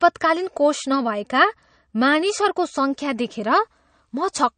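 From start to finish the speech carries plainly audible damage, likely from MP3 compression at a low setting, which fits a bitrate around 40 kbps. Nothing survives above 9.1 kHz, so the treble is sliced off at a fixed point and s sounds lose their sparkle. Weak frequency components drop in and out between frames, giving a watery, swirly texture, and attacks smear. A spectrogram shows a flat ceiling at 9.1 kHz with patchy, flickering holes below it.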